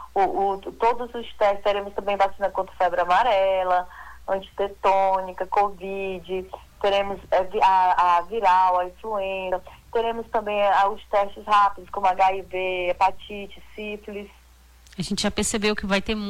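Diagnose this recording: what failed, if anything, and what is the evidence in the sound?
A single short glitch cuts through the sound from 9.48 to 9.53 s, lasting about 50 ms. This is damaged data in a compressed stream, a codec-stage fault. Bytes in the encoded file or stream at that point were lost or corrupted, so the decoder misread those frames, lost its place, and had to hunt for the next valid frame header before clean decoding resumed.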